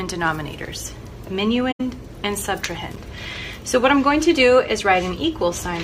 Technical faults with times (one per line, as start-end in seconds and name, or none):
1.71-1.81 AAC frame loss with muting
2.91-2.96 loose connector crackle